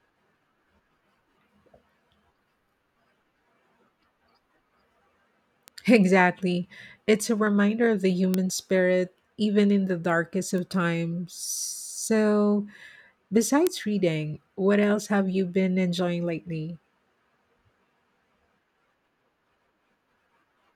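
Bit error spikes at 5.68, 8.34, 10.58 and 13.67 s: a single flipped bit in one or two samples throws the value off by a power of two and back, giving sharp ticks unrelated to the speech, peaking around -20, -8, -20 and -2 dBFS.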